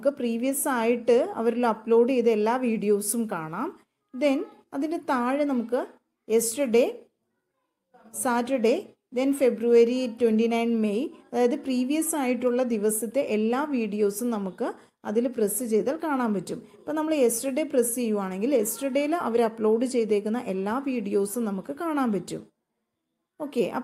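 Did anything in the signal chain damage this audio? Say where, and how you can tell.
No, nothing in the signal chain audibly damaged this audio. No stage from capture through to playback leaves any trace that can be heard.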